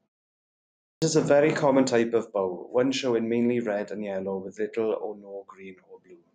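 Speech, where the output device dozes through the opening 0.89 s of silence and wakes late, a clipped start after a pause that swallows about 130 ms from 0.89 to 1.02 s, so the sound cuts in abruptly.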